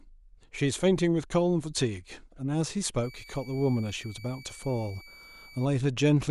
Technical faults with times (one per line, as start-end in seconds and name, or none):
3.03-5.65 switching supply whistle